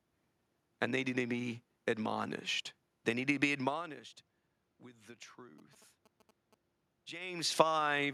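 GSM signalling bursts intrude on this speech recording from 5.58 to 6.54 s, just after "be admonished with the". A nearby 2G handset, apparently signalling rather than carrying a call, radiates short clusters of radio bursts that the audio circuitry rectifies into sound. The result is a galloping dit-dit-dit of brief buzzes at a repetition rate of about 217 Hz, sitting roughly 10 dB below the speech level.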